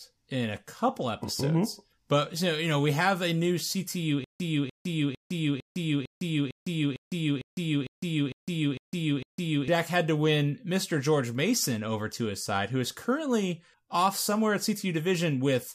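From 4.24 to 9.68 s the speech falls into a stutter with silent gaps: a 296 ms fragment repeats twelve times, each followed by 157 ms of digital silence, likely a stalled stream replaying its last buffer.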